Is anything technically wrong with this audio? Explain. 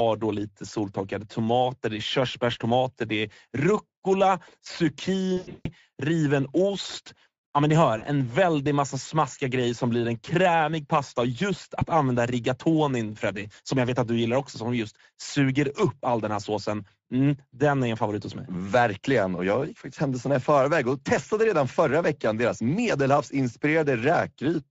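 Yes. Throughout, the speech sounds hoarse and grainy, with a noisy edge. That is Speex codec damage at about 16.8 kbps, where too few bits describe the excitation signal, so the CELP coder's reconstruction of each voiced sound comes out rough and synthetic.

At 5.37 to 5.68 s, at 7.97 to 8.05 s, and briefly near 11.8 s, the sound is stretched and fades. This is VoIP packet loss concealed by the speech codec. The decoder repeats its last pitch and filter with falling gain, covering about 260 ms of losses in the first event, 40 ms in the second and 20 ms in the third.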